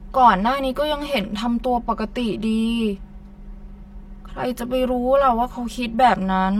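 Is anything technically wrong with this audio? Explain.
Yes. Throughout the speech there is channel delay (comb filtering): one channel arrives around 5 ms late and the two are summed to mono, cancelling at evenly spaced frequencies from about 100 Hz upward. The result is a hollow, phasey tone with fixed spectral notches.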